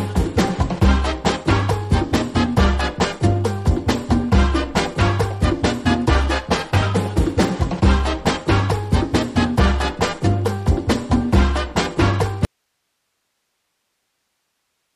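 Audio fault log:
12.45 s to the end: audio dropout to a faint residue. The sound cuts off abruptly and only low hiss remains, about 55 dB below the signal. The likely cause is the source signal being lost while the path after it stayed live.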